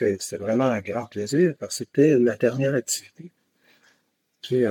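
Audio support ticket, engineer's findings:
No audible faults found on listening.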